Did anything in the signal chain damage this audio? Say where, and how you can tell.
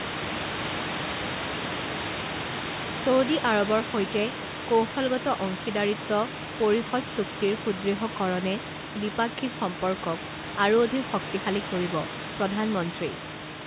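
No, nothing in the signal chain damaged this audio.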